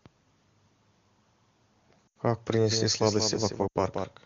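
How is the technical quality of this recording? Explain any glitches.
The recording has two kinds of fault: two dropouts from lost AMR speech frames, and a doubled audio track over the last part of the clip. The AMR wideband (HD Voice) coding itself adds only faint damage, at most.

Lost AMR speech frames occur at 2.07–2.17 s and again at 3.67–3.78 s. Each gap lasts about 80 ms, which fits four consecutive 20 ms frames failing their checksum after radio errors. The decoder fills the hole by reusing the last good pitch and vocal-tract settings while lowering the gain. Because this is wideband, the stretched sound drops to near silence within two frames, and the speech returns weak or rough for a moment.

The doubled audio track starts abruptly at 2.70 s and runs to the end of the clip. A second full-band copy of the speech trails roughly a fifth of a second behind the original, at about 5 dB lower. 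It has no decay and no room colouring, so it sounds like a flat, detached repeat rather than reverberation. The likely cause is the same signal being captured a second time through a slower path and mixed back in.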